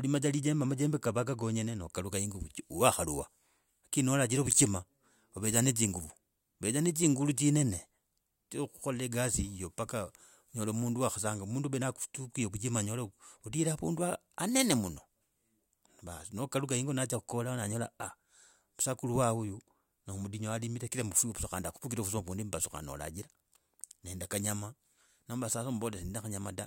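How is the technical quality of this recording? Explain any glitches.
No glitches or technical faults can be heard here.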